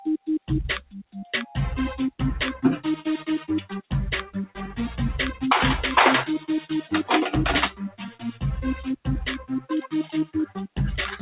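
Throughout the clip the level pumps and fluttters, with sustained parts and decaying tails sinking while onsets stay fairly intact, a swing of roughly 10 dB. This is a noise suppressor applied to music or sounds. A suppressor tuned for speech is treating steady and reverberant material as background noise and keeps pulling it down. The audio also stops at 4 kHz, which fits the band limit of a G.711 A-law call path.

Within that, six stretches are cut by the noise suppressor harder than the rest:

0.79 to 1.12 s, dropping by about 19 dB
2.96 to 3.93 s, by about 17 dB
4.23 to 4.76 s, by about 16 dB
6.39 to 6.92 s, by about 11 dB
7.7 to 8.43 s, by about 15 dB
9.38 to 10.78 s, by about 19 dB

In each, the sound sinks or its decay is cut short. The suppressor judged these passages to be noise and attenuated them beyond its general action.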